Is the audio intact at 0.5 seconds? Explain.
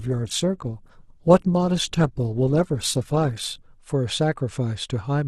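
No. From 0.0 to 3.78 s the adaptive stream is starting at a low bitrate, consistent with roughly 12 kbit/s Opus, so the sound is dull and smeared. On a spectrogram the treble band stays empty until it suddenly widens, with no gap, at 3.78 s.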